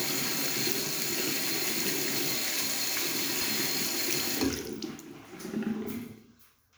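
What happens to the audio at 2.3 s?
Nothing goes wrong at 2.3 s; the sound passes that point intact, with no break, click or distortion.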